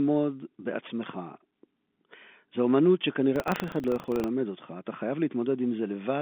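From 3.32 to 4.31 s the speech takes on a steady robotic rattle at 25 Hz. This is buffer tearing: the writer and reader of the playback ring buffer have slipped and cross inside every period, which fits a period of about 40 ms. A small sliver of each buffer, a couple of percent, carries audio from roughly 70 ms earlier, joined hard at both edges. Unlike random packet-loss dropouts, the clicks repeat at one fixed rate and sit under the narrow telephone-band sound only while speech is present.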